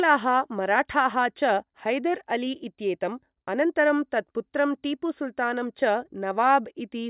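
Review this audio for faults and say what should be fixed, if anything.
Nothing in this speech recording needs fixing. No fault can be heard anywhere in it, so there is nothing to prevent.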